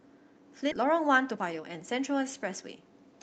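A skip ahead at 0.71 to 0.73 s drops roughly 0.7 s of speech while later audio was already waiting. Playback lunges forward with no fill, so the two sides of the cut butt together almost directly and a chunk of the utterance simply vanishes.

A jitter buffer speed-up runs from 0.81 to 2.91 s, right after the jump. The receiver trims short pitch-period slices over and over, about 0.3 s in total, playing the speech roughly 12% faster at unchanged pitch so it sounds rushed. Through both faults the call path's Opus coding adds its usual coding noise, with a top end stopping near 8 kHz in the 32 kbps stream.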